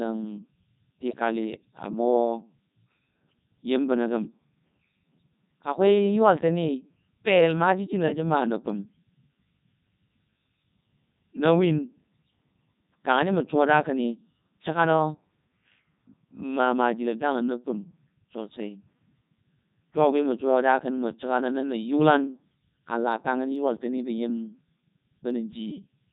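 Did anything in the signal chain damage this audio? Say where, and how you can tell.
Yes. Throughout, the speech sounds robotic and buzzy. That points to the Codec 2 vocoder, likely at its 3.2 kbit/s mode, rebuilding the voice from sine waves rather than the original waveform.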